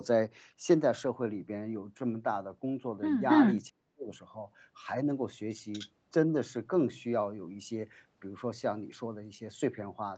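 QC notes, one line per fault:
3.29–3.61 s and 5.72–5.9 s, echo leak: a delayed copy of the speech comes back, at 275 ms behind and strong, around 5 dB above the speech in the first, then at 239 ms and much fainter, about 15 dB below, in the second. The likely cause is a loudspeaker-side echo canceller leaving residue.
3.7–4.1 s, speech suppressed in double talk: the speech drops sharply, by around 35 dB at its deepest, over roughly 400 ms while the far side is talking. Likely the echo canceller, unable to separate talker from echo, turned both down.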